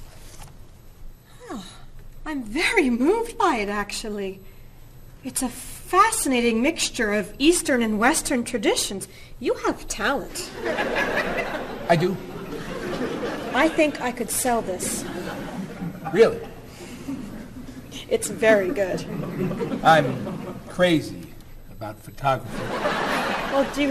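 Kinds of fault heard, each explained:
MP2 compression: dull, gurgling, granular sound throughout, likely Layer II coding near 80 kbps; the spectrogram shows upper sub-bands blinking on and off.
DAB burbling: uncorrected bit errors put short blips of noise into single sub-bands at 6.83–6.87 s and 11.13 s; the spectrogram shows isolated bright blocks.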